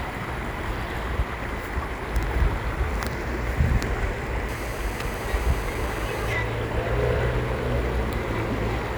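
From 4.49 s to 6.33 s a hard, raspy buzz sits on top of the sound, nearly steady and about 18 dB below the recording. It is GSM phone buzz: a 2G handset on a call close to the recording chain was transmitting in bursts about 217 times a second, and the audio circuitry rectified those radio pulses. The result is a 217 Hz tone dense with harmonics that bears no relation to the sound itself.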